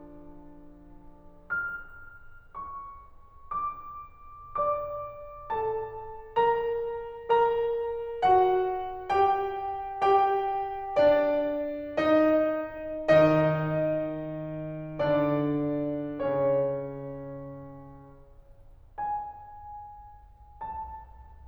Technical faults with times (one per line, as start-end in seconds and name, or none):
none